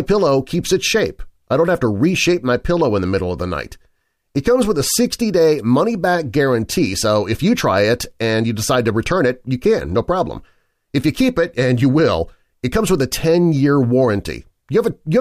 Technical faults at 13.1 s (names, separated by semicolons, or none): none